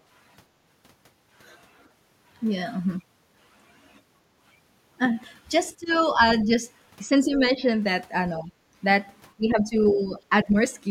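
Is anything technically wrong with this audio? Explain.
Yes, there are two related problems, both typical of an echo canceller struggling with people talking over each other.

First, speech suppressed in double talk, at 5.77–5.93, 6.16–6.20, 7.05–7.64, 8.40–8.51, 9.37–9.75 and 9.91–10.56 s. The talker's level dips in short bites, deepest in the first one at around 20 dB down, and only slight in the 6.2 and 7 s spots. This is likely the canceller failing to separate the talker from the far end and ducking everything.

Second, the other side's voice leaking through, right around 9.9 s, overlapping that last dip. It's a brief scrap of a second voice sitting roughly 20 dB under the talker. The likely cause is leftover loudspeaker echo that the canceller didn't fully remove from the microphone, so a faint trace of the far end slips into the signal.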